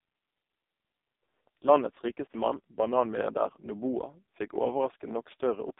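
Throughout, AMR narrowband mobile codec compression at heavy damage, fitting its lowest 4.75 kbps mode, leaves buzzy, synthetic speech confined to 250 Hz–3.7 kHz; spectrograms show nothing above 3.8 kHz.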